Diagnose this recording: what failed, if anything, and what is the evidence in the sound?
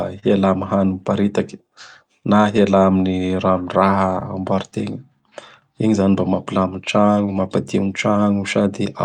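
Clock drift between sender and receiver, at the network jitter buffer. The sender's clock runs roughly 2 percent slow, so the buffer keeps draining. Small timing hiccups recur across the whole speech clip at uneven intervals. The receiver must keep padding the stream to stay in step.

A short stall from a late packet, also in the jitter buffer. From 0.19 to 0.24 s a sound is held about 30 ms too long. The packet arrived late, the buffer ran empty, and the last sound was stretched. Nothing is missing afterwards.

Repeated timing corrections, at the receiver's buffer. From 1.21 to 8.63 s, small repeated pieces slow playback to 98 percent speed. Altogether they add about a tenth of a second. The edits all stretch, never cut, and are unevenly spaced.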